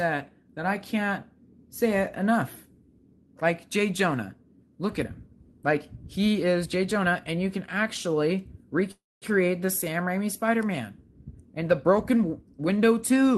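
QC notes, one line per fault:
8.91–9.25 s, call audio freeze: the sound halts and its last moment is drawn out into a short fading buzz that sinks to near silence for about 0.23 s, filling roughly 0.3 s in all. Playback then resumes exactly where it stopped, so nothing is skipped and everything after arrives about 0.3 s late. A packet-loss dropout would cut material out instead. The likely cause is delayed packets draining the jitter buffer.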